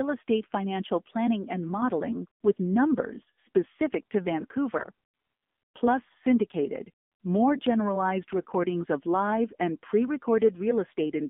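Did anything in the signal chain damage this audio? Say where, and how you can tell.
Yes. The codec stage is the main culprit: the whole clip has gone through the AMR narrowband mobile codec. Nothing is heard below about 150 Hz or above 3.6 kHz, and the speech is plainly buzzy and synthetic, which fits a low AMR-NB mode of around 7.4 kbps rebuilding the voice from sparse pulses.

The radio link adds AMR bit errors at two points: 4.78 to 4.87 s, just after "with numbers specific to", and 8.38 to 8.45 s, between "syndicated more generalized" and "of live and pre". Pitch and level hold, but the voice briefly turns hoarse and gargly, with the first burst harsher. That fits a few 20 ms frames arriving with unprotected bits flipped, which misplaces the excitation pulses.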